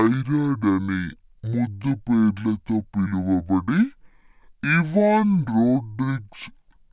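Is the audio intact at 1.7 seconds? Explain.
No. At 1.7 seconds the clip is affected by a wrong sample rate, a fault that runs through the whole recording. Speech captured at 16 kHz is being played back at 8 kHz with no conversion, so each second of samples takes two seconds to play. Speed drops to half and pitch falls a full octave, 12 semitones, together. The voice sounds deep, slow and dragged, with its higher frequencies pulled down into a muffled range.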